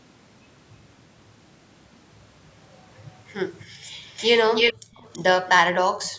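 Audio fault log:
3.71–3.93 s, 4.74–4.94 s and 6.12 s to the end: background gated by the echo canceller. The room sound dips by about 11 dB in the first instance, then falls away almost entirely, about 40 dB, as the canceller clamps the microphone.
4.06–4.74 s, 4.94–5.19 s and 5.47–5.52 s: echo leak, a delayed copy trailing the speech by 329 ms. It is likely caused by a loudspeaker echo the canceller failed to remove. It starts at about the same level as the speech, then falls to faint scraps around 25 to 30 dB down. The fixed lag separates it from room reverberation.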